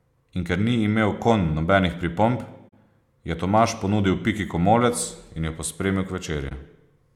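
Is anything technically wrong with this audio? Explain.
Yes, there are two short corrupt frames concealed, at 2.68 to 2.73 s just after "imel konj nobenih pripomb" and at 6.48 to 6.56 s after "jo pospremil". The decoder caught damaged data and patched over it, over spans of roughly 50 and 70 ms. Those lengths fit about two and three frames.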